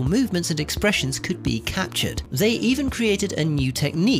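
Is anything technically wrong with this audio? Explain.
Yes, two faults. At 1.21 s, an overlap between stream segments trims a sliver of real sound, leaving a single click or skip. Nothing is reordered, only lost. At 2.25 s, chunks out of order: a 5.8 ms chunk plays one chunk late. Nothing is lost, but the swapped joins produce a brief jumbled moment.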